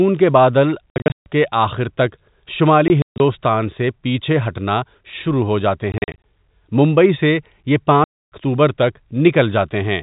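Packet loss filled with silence cuts the speech at 0.9–1.26 s after "کے بادل", 2.88–3.2 s before "سے پیچھے ہٹنا", 5.92–6.18 s, and 8.04–8.32 s after "سے یہ". Lost packets became hard-edged silent holes. The hole lengths suggest 20 ms packets.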